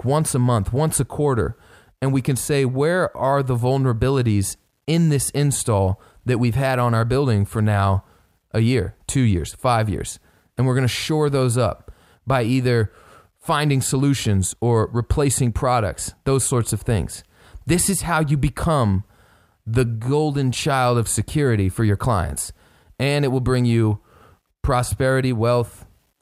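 No technical faults can be heard in the speech at any point; the signal stays continuous and steady throughout.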